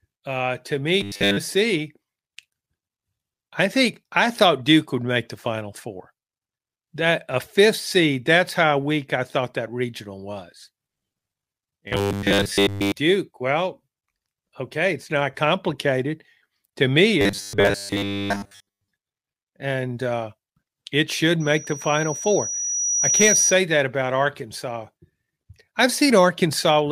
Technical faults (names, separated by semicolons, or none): robotic sound from repeated short buffers; loudspeaker feedback squeal